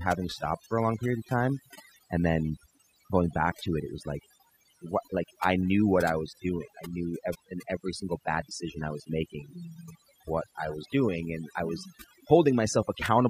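Overdone noise removal runs throughout: aggressive band-by-band suppression silences the background to twinkling specks and strips quiet speech detail.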